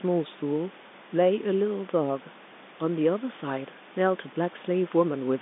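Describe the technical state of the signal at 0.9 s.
The audio is intact at 0.9 s, carrying only the band-limited telephone sound of G.711 coding and room noise about 26 dB below the speech, neither of which is a fault.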